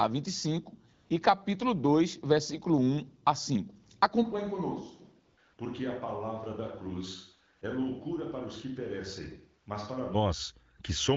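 AMR comfort noise at 0.93–1.09, 5.25–5.37, 5.53–5.57, 7.57–7.61 and 10.77–10.79 s in this speech recording: the sender judged these moments silent and stopped sending speech frames, so the receiver substituted smooth synthetic noise. A switch to a distant microphone runs from 4.25 to 10.13 s. The sound abruptly turns hollow and roomy, drops by roughly 10 dB and carries background noise only about 35 dB below the speech, likely because the close microphone dropped out.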